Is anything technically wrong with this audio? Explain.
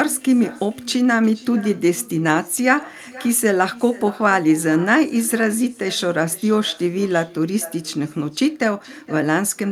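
Yes. Throughout the speech there is echo with no canceller. The far end is playing the call through a loudspeaker, its microphone captures that playback, and no echo cancellation strips it out, so the signal returns over the network round trip. Each phrase is therefore trailed, about half a second later, by a faint copy roughly 20 dB below the direct speech, sounding thinner than the original.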